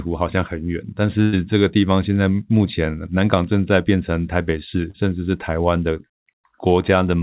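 At 1.22 s the sound turns into a held buzz or fading hiss that lasts until about 1.35 s, and when the speech returns it has jumped ahead. This is a burst of packet loss: roughly 100 ms of audio never arrived in time, so the receiver stretched the last sound for about 105 ms, lowering its level as the gap went on. It then picked up again later in the stream, leaving the intervening stretch of speech missing.

From 4.91 to 4.96 s there is a brief smear, a wobble in the sound lasting only a few hundredths of a second. It comes from short concealed packet loss: about 40 ms failed to reach the decoder, and the receiver covered the hole with roughly 33 ms of sound extrapolated from what came just before, then blended back into the real signal. The narrow band throughout, with nothing above 4 kHz, fits a G.711 mu-law call path.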